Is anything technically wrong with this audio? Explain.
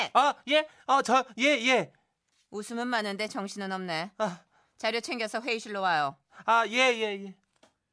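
No, nothing stood out as technically wrong when listening to this speech recording.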